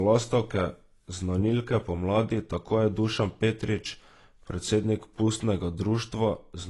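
AAC compression, throughout: nothing sounds above 11.5 kHz, and the speech is plainly dull and smeared, likely from low-bitrate AAC-LC coding near 32 kbps discarding detail.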